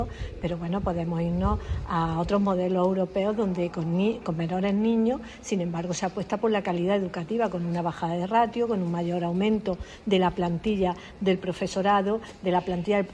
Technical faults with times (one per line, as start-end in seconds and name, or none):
none